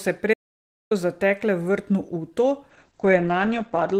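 A speech clip with two faults. An audio dropout to silence runs from 0.34 to 0.91 s, leaving about 0.57 s of silence with no room tone, likely from the input briefly disconnecting or muting. From 2.71 s to the end, a call bitrate drop makes the speech coarse and muffled, with the top end cut from 20 kHz to 8 kHz. This fits the encoder falling from roughly 32 to 9 kbps and staying there for about 1.2 s.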